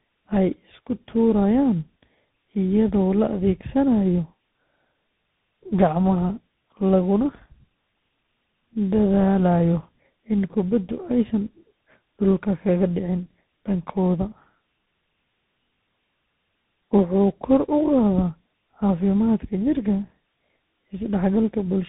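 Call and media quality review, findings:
Tandem speech coding, throughout. Rough, muffled, warbly speech, band-limited to about 3.8 kHz. Two speech coders in series: GSM full rate decoded, passed through G.711 A-law, then re-coded by CVSD. The compounded grit and noise go beyond what either coder alone produces.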